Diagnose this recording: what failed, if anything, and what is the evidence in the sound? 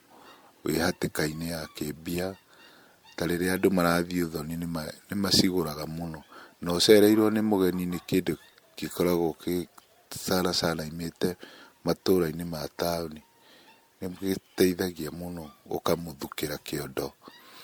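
Codec stage, generation loss: the speech sounds swirly, hollow and smeared, with blurred attacks, throughout, yet extends to 20 kHz. That points to roughly seven likely MP3 re-encodes around 96 kbit/s, not one low-bitrate pass.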